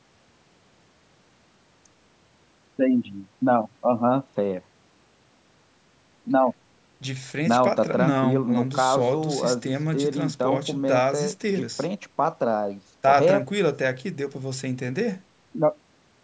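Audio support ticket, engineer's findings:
Speech signal band-limited to 8 kHz by the call microphone processing, with its high-pass filter trimming the lowest bass as expected, and no faults found.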